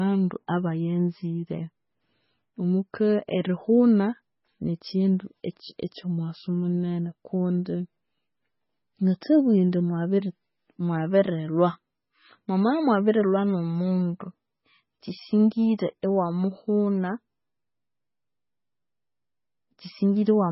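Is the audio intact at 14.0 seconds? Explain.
No. At 14.0 seconds, as throughout the speech, nothing is heard above 5.6 kHz, and the sound is watery and swirly with smeared attacks. This is likely MP3 compression at a very low bitrate, about 16 kbps, where starved weak frequency lines flicker between frames.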